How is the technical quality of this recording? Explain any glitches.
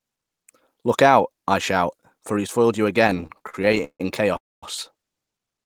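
The recording has two network faults late in the speech, both of which stretch the audio without losing any of it.

Repeated stalls (stutter) run from 3.07 to 4.36 s. Packets kept arriving late, so the jitter buffer emptied 21 times, the longest wait 154 ms. The receiver extended the last sound each time, about a third of that span, giving a dragging, hiccuping delivery. A spectrogram shows smeared, repeated slices; the waveform shows uneven blocky pauses.

A call audio freeze follows from 4.37 to 4.63 s. The sound stops for 256 ms, most of it (about 230 ms) near-silent, then resumes where it left off. The likely cause is packets held up in transit, draining the jitter buffer. It appears as a flat gap in the waveform and a blank vertical band on the spectrogram.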